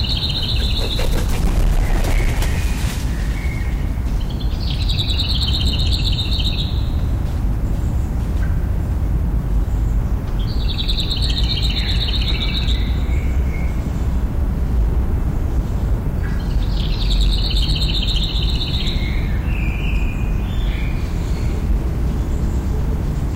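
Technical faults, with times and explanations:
Throughout, hard clipping: every loud moment carries a harsh, gritty fuzz and crackle on its peaks. The signal was driven about 12 dB past what the stage could pass, so roughly one sample in twenty was flattened, adding harmonics high up the spectrum.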